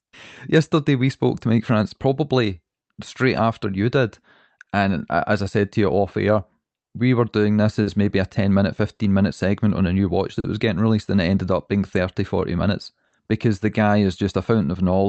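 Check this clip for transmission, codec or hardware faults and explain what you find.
Three related timing faults run through this speech, all caused by the sending clock running about 3 percent slow relative to the receiver.

Clock drift between sender and receiver affects the whole clip. The jitter buffer keeps running short, so the receiver must pad and occasionally stall. Unlike random network jitter, the disturbances always push in the same direction.

Repeated timing corrections run from 0.77 to 7.40 s at about 97 percent speed, adding roughly 200 ms, and from 10.00 to 15.04 s at 98 percent, adding about 100 ms. The tempo sounds slightly dragged and uneven, not pitch-shifted.

Short stalls from a late packet occur at 4.63, 7.83, 8.95, 10.40 and 13.08 s. The buffer empties, and about 40 ms of the last sound is held, with a slight buzz or dip. Nothing is lost, which separates these from dropouts.

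The band limit near 8 kHz fits the call codec working normally.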